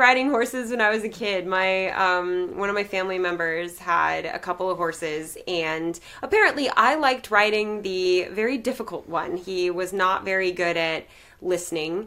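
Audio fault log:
Nothing to log here, as no faults turn up anywhere in the audio.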